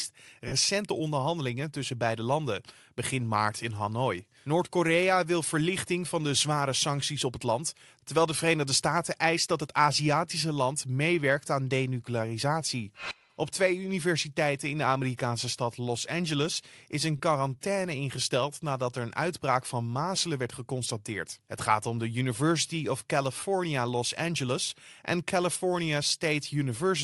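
Bluetooth LC3 compression runs throughout, giving the speech a plainly audible grainy, breathy top end. The likely cause is LC3 coding at about 48 kbps with 7.5 ms frames.

Lost LE Audio frames occur at 0.48–0.52 s, 17.17–17.20 s and 23.40–23.42 s. The decoder replays the last spectrum with random signs, producing brief noisy smears of 37.5 ms, then 22.5 ms twice.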